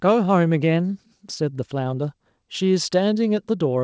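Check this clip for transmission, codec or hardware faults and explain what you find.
No transmission, codec or hardware faults.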